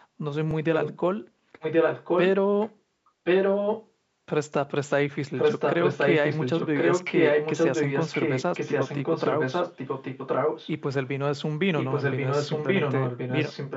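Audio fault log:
0.51–0.53 s and 8.98–9.00 s, repeated buffer. New audio arrived late at the device both times. It played the last block of speech one extra time. Each block is about 21 ms, which fits a 1024-sample buffer. There is a hard join where the copy starts. No speech is lost, because the stream picks up where it left off.
0.73–1.00 s, 1.60–2.23 s, 2.61–2.72 s, 3.24–3.91 s, 5.35–10.70 s and 11.77 s to the end, echo leak. A delayed copy of the voice trails the speech by about 1.08 s. It is likely from a far side playing the call on a loudspeaker, where the echo canceller missed part of what its microphone picked up. The copy comes in scraps at first, then in long stretches. Its level swings from about 25 dB below the speech to about 5 dB above it.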